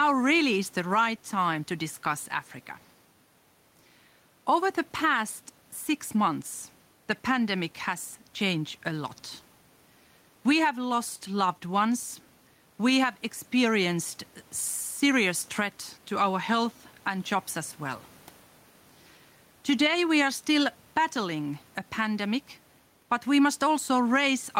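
Gain pumping runs throughout the speech, from start to finish. The level is pulled down under each louder stretch of talking, with a swing of roughly 5 dB. The likely cause is input gain set too high for the microphone, with a fast limiter or compressor clamping down on each peak. That evens out loud and quiet passages and leaves the delivery sounding squashed. The room noise sits about 36 dB below the speech.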